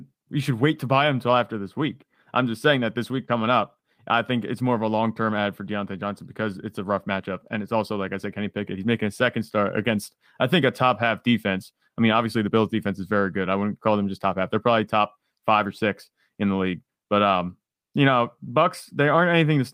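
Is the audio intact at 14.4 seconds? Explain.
No. At 14.4 seconds the audio sits inside a run of repeated timing corrections that lasts from 0.13 to 19.58 s. The receiver keeps trimming tiny slices out of the speech so that playback runs at 104 percent, and the cuts are heard, if at all, as a faint hiccup or a slightly rushed, uneven pace. Unlike packet-loss dropouts, no gaps or silences appear, and unlike a smooth speed change, the pitch stays put while the rhythm stumbles.

The cause is clock drift between sender and receiver. The sender's clock runs roughly 4 percent fast, so the receiver's jitter buffer keeps overfilling, and every trim is there to drain that surplus. That is why all the edits go the same way, always removing material and never repeating it. They also arrive at irregular intervals rather than on a fixed beat, which sets drift apart from a steady periodic glitch.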